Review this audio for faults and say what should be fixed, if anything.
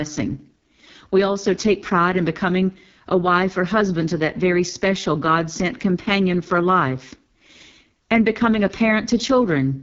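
The whole clip runs through the AMR wideband (HD Voice) codec, and it's badly squeezed: the speech sounds rough and raspy, with nothing above about 7.3 kHz. That harsh, buzzy texture fits the lowest 6.6 kbit/s mode, where the pulse model runs short of bits. To prevent it, negotiate 12.65 kbit/s or higher on the link.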